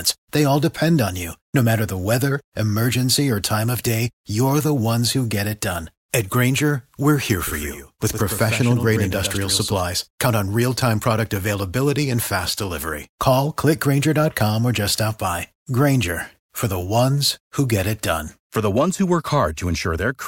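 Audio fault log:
7.47–9.81 s, doubled audio track: just after "we're here", a second full-band copy of the speech trails the original by about a tenth of a second, roughly 10 dB quieter, with no decay or room colour, and it switches on and off abruptly. This is likely a second capture through a slower path. On a spectrogram every syllable shows a fainter duplicate shifted right. The waveform shows echoed onsets that appear and vanish sharply at both ends.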